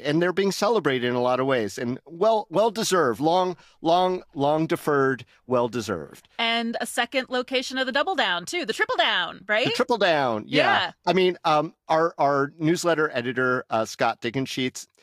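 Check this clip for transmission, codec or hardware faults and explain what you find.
No transmission, codec or hardware faults turn up in this clip.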